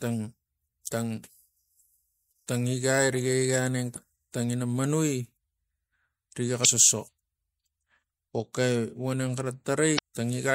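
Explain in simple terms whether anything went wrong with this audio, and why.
Damaged data in a compressed stream causes short blips at 3.93–3.97, 6.61–6.65 and 9.95–9.99 s, where corrupted bytes make the decoder misread frames and briefly lose its place.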